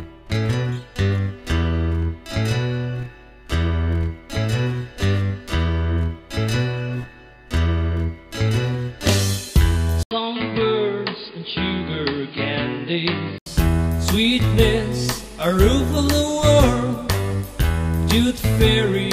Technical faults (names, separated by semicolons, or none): input switched to a poorer device